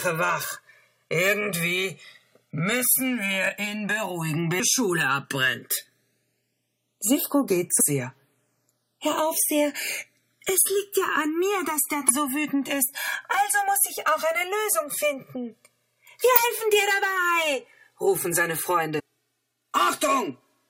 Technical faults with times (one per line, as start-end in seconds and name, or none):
0.00-20.70 channels drifting apart
7.79 damaged data in a compressed stream
12.09-12.11 damaged data in a compressed stream
16.36 damaged data in a compressed stream
18.98-19.00 damaged data in a compressed stream